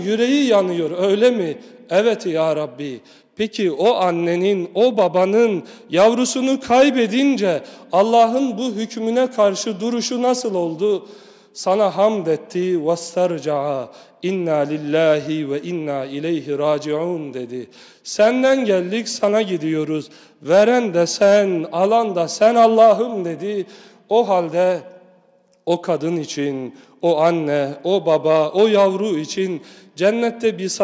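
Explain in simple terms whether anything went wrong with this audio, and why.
Nothing stood out on listening; no moment in the recording sounded broken, interrupted or out of place.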